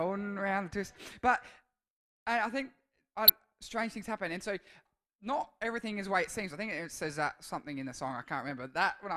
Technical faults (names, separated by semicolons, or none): DAB burbling